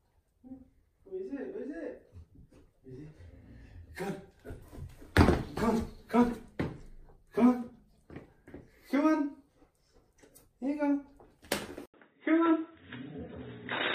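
At 11.86 s an 80 ms waveform gap, then dull sound with nothing above 3.8 kHz to the end, the spectrogram blank overhead: likely an input switched to a poorer device.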